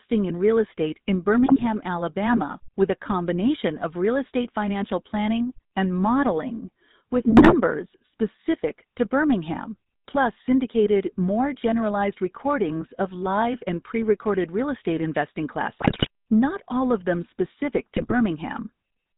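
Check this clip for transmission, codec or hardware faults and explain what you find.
Two faults are present: GSM full-rate codec coloration across the whole clip, and four bursts of GSM bit errors.

The GSM full-rate codec affects all of the speech. The coder models the vocal tract and drives it with evenly spaced pulses, keeping only every third excitation sample, and it discards everything above 4 kHz. This fits the 13 kbps full-rate coder. It leaves the voice dull, buzzy and gravelly throughout.

GSM bit errors occur at 1.46–1.63 s, at 7.30–7.56 s (after "planning and modeling with", before "specific to"), at 15.78–16.08 s (after "recorded real estate investing", before "not all of them"), and at 17.96–18.13 s (after "all of them specific"). Corrupted bits on a weak radio link scrambled the decoder's filter, pitch and gain values. This distorted the spectrum and level frame by frame, so the speech breaks into squawks, pops and gargling. 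The 15.78 s burst is the longest.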